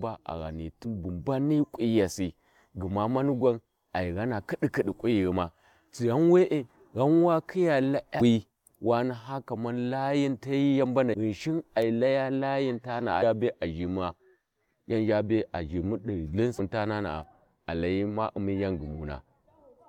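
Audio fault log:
0.84 s, 8.20 s, 11.12–11.15 s, 13.21 s and 16.58 s: damaged data in a compressed stream. Corrupted bytes make the decoder misread frames and lose sync until it finds the next frame header, so each spot breaks the speech with a brief chirp or blip lasting about 16 to 22 ms.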